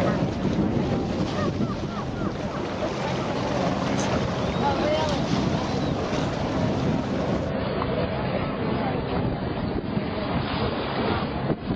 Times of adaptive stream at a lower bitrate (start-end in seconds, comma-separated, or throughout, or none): 7.50-11.76